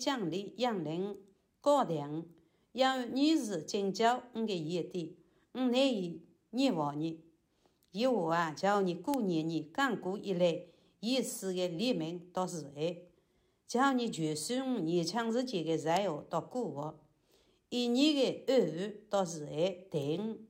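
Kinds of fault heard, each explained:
Bit error spike: A single flipped bit in a digital sample makes its value leap by a power of two and then snap back. Here it is heard as three isolated sharp ticks, at 9.14, 15.97 and 20.02 s. Their peaks reach about -10, -16 and -28 dBFS. Each tick is broadband and has nothing to do with the surrounding sound. The middle one is a short run of three corrupted samples.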